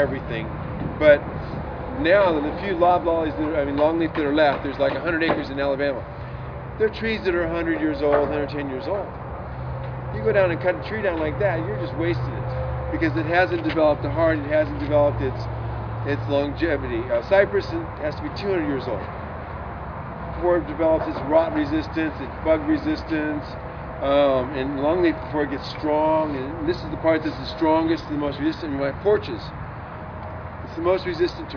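No technical faults can be heard anywhere in the audio; the signal stays continuous and stable throughout.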